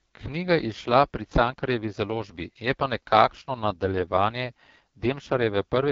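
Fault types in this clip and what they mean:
AMR wideband (HD Voice) codec: The speech runs through a mobile wideband codec that rebuilds it from a pulse-excited vocal tract model, and here the damage is heavy, rough and raspy throughout, which fits the lowest 6.6 kbit/s mode. On a spectrogram, harmonics look smeared and grainy below about 6.4 kHz, a noise-like band sits above that, and nothing appears above 7.5 kHz. The waveform looks coarse, with blurred pitch-period detail.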